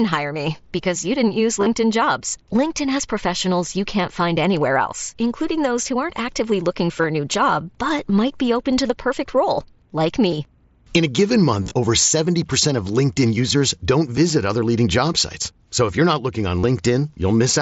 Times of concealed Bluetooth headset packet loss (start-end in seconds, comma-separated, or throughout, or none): 1.60-1.66, 7.02-7.04, 10.31, 11.63-11.74, 16.60-16.63